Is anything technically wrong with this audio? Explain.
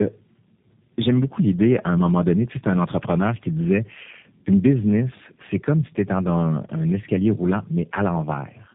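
Yes. Throughout the speech there is tandem speech coding. The audio has passed through two low-rate speech codecs in sequence, and the final stage sounds like G.729A at 8 kbit/s. Each coder has to model the artefacts left by the previous one, so the errors compound. Nothing is present above 3.8 kHz, giving a muffled, narrowband quality. The voice also has a rough, buzzy texture and a warble, more than a single codec pass would produce.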